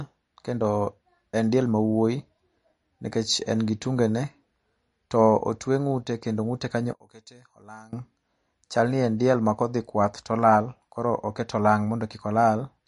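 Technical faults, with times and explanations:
Throughout: MP3 compression, likely at a low bitrate near 40 kbps, discards everything above 10.6 kHz and thins weak detail, leaving plainly audible watery, swirling speech with dulled treble.
6.93 to 7.93 s: one channel inverted, likely a polarity flip, makes the shared centre cancel when summed to mono, so the speech drops by about 25 dB to a faint trace.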